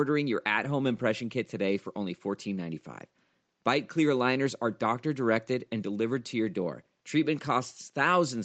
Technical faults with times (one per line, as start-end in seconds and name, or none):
none